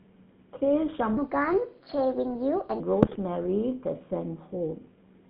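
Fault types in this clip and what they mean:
GSM full-rate codec: The whole clip has that buzzy, gravelly GSM roughness, with the line squeezed to roughly 150 Hz to 3.6 kHz. That fits the old 13 kbps full-rate coder, where a vocal-tract model driven by sparse pulses plainly flattens the speech.
Section at the wrong speed: From 1.17 to 2.80 s the speech suddenly runs 1.34 times fast, so it's hurried and about five semitones higher, pitch and tempo shifting together. Most likely that stretch got played against the wrong clock during editing or playback.
GSM bit errors: Around 3.03 to 3.18 s the speech breaks into a short burst of squawks and gargling. Flipped bits corrupted the filter, pitch or gain values the decoder relies on, which points to a handful of consecutive frames coming out mangled.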